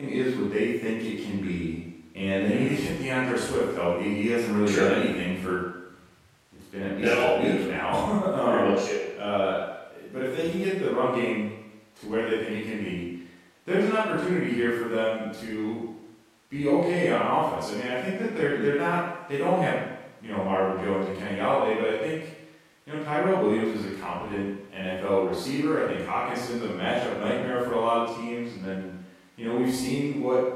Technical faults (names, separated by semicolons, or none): none